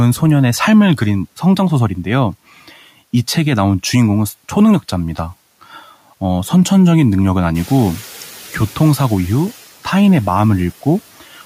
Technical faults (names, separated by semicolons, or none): noise suppressor catching up